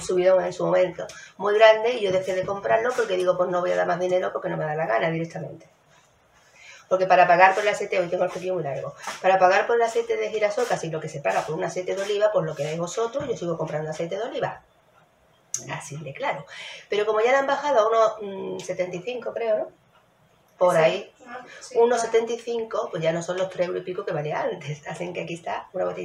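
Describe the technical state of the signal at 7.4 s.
At 7.4 s the signal is intact, with no dropout, distortion or other fault audible at that moment.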